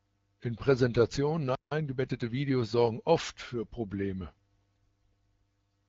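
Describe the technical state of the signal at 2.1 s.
At 2.1 s the audio is inside a time-compressed catch-up, which runs from 1.71 to 2.77 s and ends just before "oft für". After a stall, the player works off its backlog by dropping short slices and cross-fading the joins. The speech moves about 1.15 times faster but keeps its normal pitch. It sounds hurried. Underneath, the AMR-WB wideband coding stays light and band-limited.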